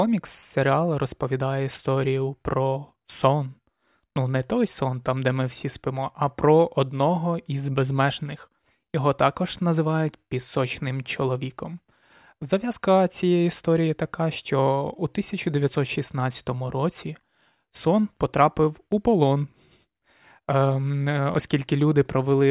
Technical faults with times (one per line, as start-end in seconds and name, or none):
none